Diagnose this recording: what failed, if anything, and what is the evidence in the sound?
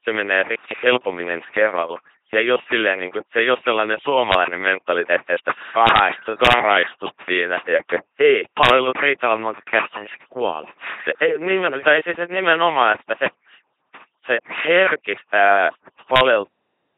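Call processing is the first culprit: there's overdone noise removal on the whole 17-second clip. The background has been pushed down, leaving little twinkling specks where individual frequency bands flick on and off. The suppressor was set so hard that anything close to its noise estimate got gated, and the quieter parts of the speech went with it.

On top of that is a codec stage, and it's heavy damage. The speech has the buzzy, mechanical robot quality of an LPC-10 vocoder, and nothing comes through above 3.9 kHz. That sound fits the 2.4 kbit/s military codec. It rebuilds speech from a short all-pole vocal-tract filter driven either by a pulse train or by noise, with every frame treated as fully voiced or fully unvoiced. Wherever that call goes wrong, you hear a stray buzz or a burst of hiss instead of the real sound.

Last, at playback or storage, the clip has a cut-off end. At 16.46 s the audio stops mid-sound and drops straight to digital silence with no decay, and it stays silent to the end of the file. 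It sounds like the final buffers were never written or played out, so the tail of that sound is simply missing rather than fading.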